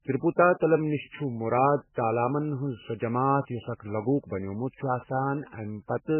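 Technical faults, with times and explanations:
Throughout, MP3 compression: watery, swirling speech with nothing above 3 kHz, likely from heavy MP3 encoding at around 8 kbps, where the treble is cut and weak frequency lines flicker between frames.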